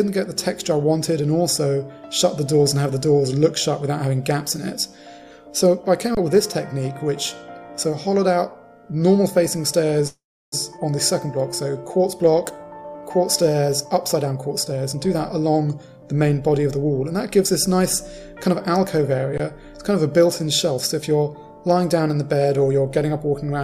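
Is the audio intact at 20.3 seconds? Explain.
Yes, at 20.3 seconds the audio plays through cleanly, with no dropout, click, distortion or other fault.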